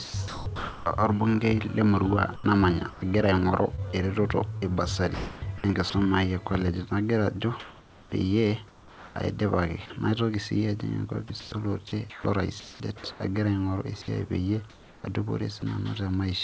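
Speech over what sounds like a G.722 call, with nothing above 8 kHz, and the voice detector is clearly misbehaving. From 0.04 to 0.86 s and again from 2.36 to 5.94 s (right after "le emurua") the sound is chopped by the voice detector, with bits swapped for synthetic hiss, likely DTX gating flicking on and off. Comfort noise in place of the background shows up from 7.60 to 9.16 s, from 11.28 to 13.20 s before "agira aing'oru esiai peyie", and from 14.70 to 15.04 s, where the real room tone turns flat and featureless, likely the sender going silent. In that last stretch the fill sits about 4 dB quieter, against a background about 27 dB below the loud parts. At 11.28 s a tiny sliver of sound is dropped by the voice detector, briefly replaced by noise, likely because the gate closed a touch early.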